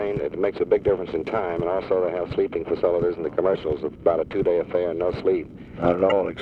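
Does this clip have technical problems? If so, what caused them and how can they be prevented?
Yes. Damaged data in a compressed stream: corrupted bytes in the encoded file make the decoder misread frames and lose sync, so the sound breaks into brief blips at 3.52–3.56 s and 6.08–6.12 s. Checksum-verified storage and error-checked transfers prevent this.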